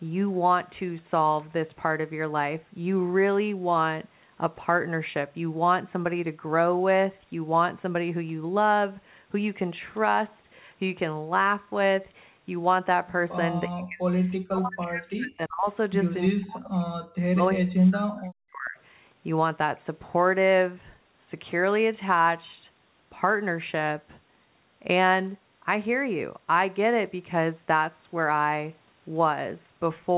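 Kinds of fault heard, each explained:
Speech suppressed in double talk: between about 13.7 and 18.8 s, the speech sinks by roughly 40 dB in four stretches, likely the echo canceller muting the talker under far-side speech. Unlike network dropouts, the speech cuts out in pieces for up to a second and a half.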